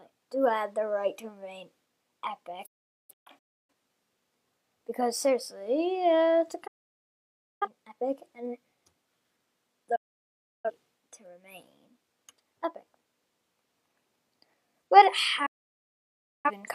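Digital broadcast dropouts mute the audio at 2.66–3.72 s, 6.67–7.68 s, 9.96–10.71 s and 15.46–16.51 s. Each time, the receiver loses frames, fades out within 8 ms, and returns once good frames arrive; the programme in between is gone. The first dropout breaks into several holes, with a longest gap of 0.43 s.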